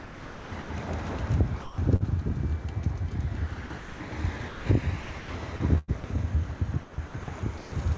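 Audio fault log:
0.00–0.70 s, 1.62–2.02 s, 3.66–4.12 s, 4.38–4.66 s, 5.02–5.30 s, 5.56–6.04 s and 6.82–7.72 s: sound chopped by the voice detector. The sound cuts in and out, with parts replaced by synthetic noise for about 0.2 to 0.6 s at a time. The likely cause is the sender's voice detector switching transmission off and replacing the sound with comfort noise.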